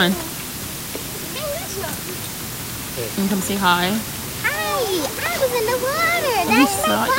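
From start to finish the audio carries low bit depth with dither. It was rounded to 5 bits with dither applied first, so the quantisation error turns into a steady, even white hiss rather than distortion, sitting only about 10 dB below the signal throughout.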